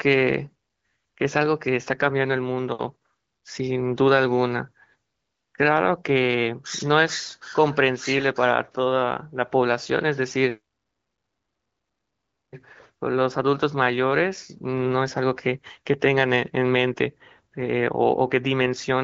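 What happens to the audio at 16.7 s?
At 16.7 s the speech carries on intact, with no dropout, glitch or other fault, only the light, steady coloration of the AMR wideband (HD Voice) codec at a rate that sounds like its higher modes.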